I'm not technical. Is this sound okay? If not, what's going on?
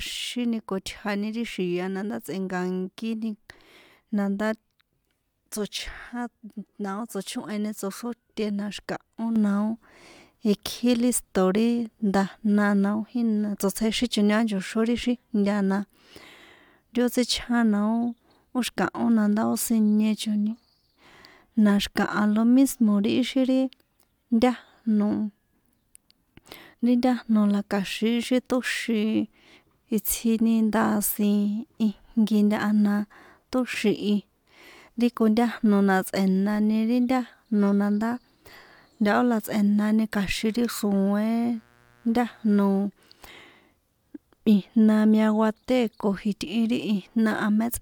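No. From 40.35 to 42.82 s, right after "na tsꞌe̱nani", a mains buzz comes in: a steady, raspy hum sitting faintly underneath the speech. It comes from the electricity supply leaking into the recording, probably through a light dimmer, a power adapter or an unshielded cable. The supply runs at 60 Hz, and each cycle produces two sharp electrical spikes. That's 120 per second, which gives the buzz its rough, edgy quality rather than a smooth hum.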